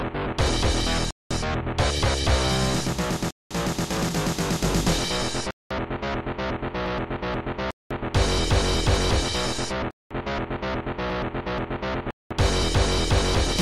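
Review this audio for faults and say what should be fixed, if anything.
The sound drops out six times, at 1.11, 3.31, 5.51, 7.71, 9.91 and 12.11 s, each hole lasting 200 ms. That's a gap between chunks: the audio arrives in 2-second pieces, and something leaves silence at every join. Nothing gets lost; the sound just gets pushed back each time. To prevent it, strip the padding and queue each chunk to start exactly where the previous one ends.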